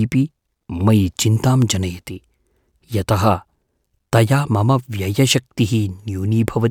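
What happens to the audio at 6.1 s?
Nothing goes wrong at 6.1 s; the speech carries on intact through that moment, with no dropout, click or distortion.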